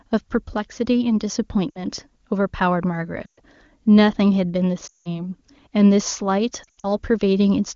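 Radio errors corrupted AMR speech frames in this wideband (AMR-WB) speech clip, whose clean coding fits a high rate such as 23.85 kbit/s. Each time, the decoder repeated the last good pitch and vocal tract settings at falling gain. The result is lost AMR speech frames at 1.70–1.83, 3.25–3.40, 4.87–5.10 and 6.63–6.92 s. The sound fades toward silence for about 60, 120, 180 and 160 ms, then returns briefly weak. The last gap is broken into short dropouts spread over about 200 ms.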